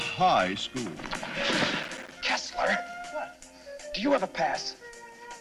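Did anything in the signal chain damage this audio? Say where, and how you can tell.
Yes. There is processor overload crackle at the driver and buffer stage, from 1.83 to 2.22 s. For that 0.39 s the sound turns gritty and torn. It sounds like a burst of clicks riding on the signal, then it clears. The texture suggests about ten short dropouts. Each one is a tiny hole of silence with hard edges. Their length fits buffers of around 5 ms. The processor missed its deadline on those buffers again and again, and the gaps add up to crackle.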